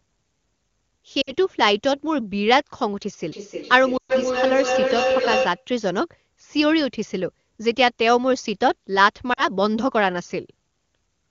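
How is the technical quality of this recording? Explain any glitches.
The recording has two kinds of glitch: brief dropouts from lost AMR speech frames, and a feedback howl in the middle. The wideband HD Voice coding itself sounds clean, which fits a high AMR-WB rate.

Lost AMR speech frames occur at 1.21 to 1.32 s, 3.97 to 4.12 s and 9.33 to 9.48 s. Radio errors corrupted the frames, so the decoder repeated its last good settings at falling gain. The sound smears and thins, then recovers. The gaps last 60, 120 and 40 ms.

Feedback howl runs from 3.29 to 5.67 s. Two devices in the same room shared the call. Each trip through microphone and loudspeaker added level. The result is a tone around 500 Hz, with the loop repeating roughly every third of a second. It peaks at about 2 dB below the speech.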